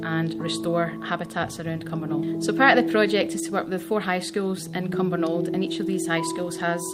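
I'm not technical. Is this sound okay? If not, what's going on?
Yes, it's fine: nothing goes wrong with the sound anywhere in the clip, so there's nothing to worry about.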